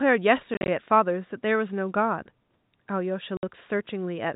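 Speech over a G.711 telephone-band path, with room noise sitting about 46 dB below the voice, suffers packet loss filled with silence at two points. From 0.54 to 0.68 s, 90 ms of audio drops out in scattered gaps, the longest 40 ms. From 3.37 to 3.43 s a solid 60 ms hole follows. The gap sizes fit 10 ms packets. Each silenced span starts and ends abruptly.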